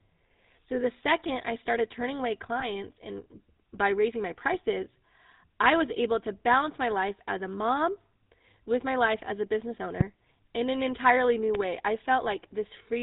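The speech runs through the GSM full-rate codec for its whole length. The codec rebuilds the voice from a vocal-tract model driven by sparse, regularly spaced pulses, and it passes nothing above 4 kHz. The plainly audible buzzy, gravelly roughness and dull top end fit 13 kbps full-rate coding.

From 2.6 to 2.68 s there are lost GSM frames. The decoder filled the gap by repeating the last good frame's settings, which fits a single lost 20 ms frame. The sound briefly holds as a rough, metallic ring before normal speech resumes.

A loud pop lands at 10.01 to 10.03 s and another at 11.55 to 11.58 s. Each is most likely a sudden voltage step or pulse from a plug, switch, static or driver glitch added to the signal. Each is heard as a sharp click roughly 15 dB above the speech, which carries on underneath.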